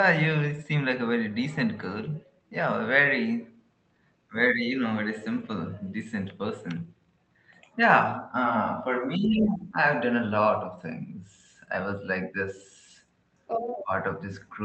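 Around 4.29 to 4.34 s the speech briefly sinks by roughly 15 dB, then dips again by about 10 dB from 4.53 to 4.75 s, and a longer dip of about 10 dB runs from 9.07 to 9.77 s. This is speech suppressed in double talk. The echo canceller likely could not tell the near talker from loudspeaker echo while both sides spoke, so it pulled the whole signal down.

Within that long dip, from 9.42 to 9.58 s, a faint second voice sits about 15 dB below the speech. A stronger burst follows from 13.47 to 13.84 s, only about 5 dB under the talker. This is the other side's voice leaking through. The far end's loudspeaker playback likely reached the microphone, and the canceller left part of it in.

Right at the end of that leak, from 13.82 to 13.92 s, the speech drops by roughly 15 dB once more, another brief double-talk suppression.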